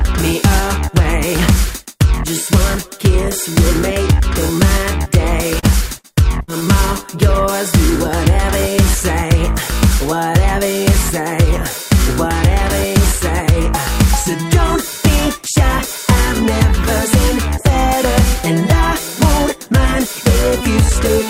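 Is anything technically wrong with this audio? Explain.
Yes, there are dropouts that were concealed during transmission.

Short concealed packet loss occurs at 5.59–5.65 s and 6.60–6.63 s. About 40 ms and then 20 ms of the stream arrived too late to be decoded. The receiver covered each hole with roughly 33 ms and 14 ms of synthesised continuation of the preceding sound, then crossfaded back into the real signal. Each gap is heard as a brief smear or wobble, and whatever fell in it is lost.

A burst of packet loss hits at 5.99–6.13 s and again at 6.43–6.50 s, with about 60 ms and 40 ms missing. The decoder extended the last sound for about 52 ms and 48 ms, fading it down. The first burst also added about 9 ms of extra length. Both come across as a held buzz or dying hiss, after which the sound resumes further along with the intervening portion gone.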